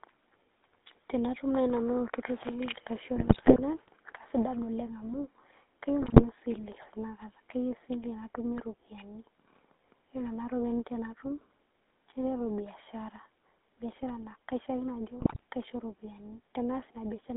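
Speech through the GSM full-rate codec, with a buzzy, gravelly roughness throughout. On a spectrogram, energy is confined to roughly 200 Hz to 3.7 kHz, which fits 13 kbit/s GSM. GSM bit errors at 3.16–3.60 s, 6.02–6.23 s and 15.20–15.44 s corrupt the decoder's frames into squawks and gargling. These show as smeared spectral bursts and sudden level spikes in the waveform.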